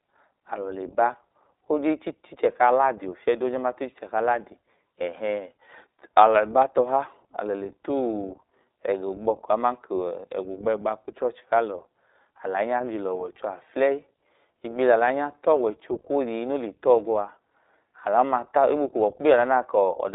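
From start to finish, the speech runs through the iLBC codec. Its band is narrow, about 300 Hz to 3.7 kHz, with nothing above 3.8 kHz. That removes the air and crispness from sibilants. Each short frame is coded on its own, with no help from the one before. The frame rhythm points to 20 ms frames, which fits the 15.2 kbps mode. The codec damage is plainly audible. The speech sounds rough and somewhat synthetic.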